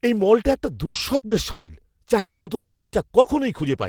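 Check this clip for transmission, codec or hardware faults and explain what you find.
Four kinds of network fault affect this speech clip, all of them losses or late arrivals of audio packets on the way to the decoder.

Repeated packet loss (robotic sound) runs from 0.85 to 1.72 s, starting right after "এই মলটা একটা". Packets went missing in four separate gaps, the longest 160 ms, totalling 360 ms. The receiver patched each hole by extending the last sound, so about 43% of that stretch is filled-in audio. The speech turns choppy and mechanical, with pieces missing between the patched fragments.

Two long stretches with no arriving audio follow, from 2.19 to 2.50 s and from 2.55 to 2.94 s. These are most likely long network dropouts. In each, the receiver stretched the last sound into a fading buzz, then went quiet for about 150 ms. That accounts for 280 ms lost in the first and 360 ms in the second. 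The speech resumes afterwards with those portions simply gone.

A lost packet rebuilt from error correction occurs at 2.47 s and again at 3.25 s, each covering 20 ms. In both cases the following packet carried a coarse, low-bitrate copy of the missing one, and the decoder played that copy. Nothing drops out, but those instants sound briefly rougher and noisier than the surrounding speech.

Short concealed packet loss spans 3.21 to 3.28 s, where 40 ms never reached the decoder in time. The receiver bridged the hole by continuing the preceding sound and then blending back into the real signal. The result is a brief smear or wobble, and the error-correction rebuild at 3.25 s falls inside it.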